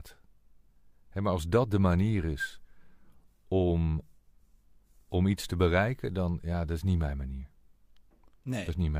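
No technical faults can be heard anywhere in this recording.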